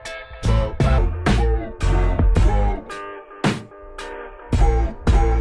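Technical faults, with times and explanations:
0.98–5.41 s, wrong sample rate: sound slows to 0.69 speed and drops 6.45 semitones, which fits 32 kHz material played at 22 kHz; the spectrogram shifts downward and the waveform stretches.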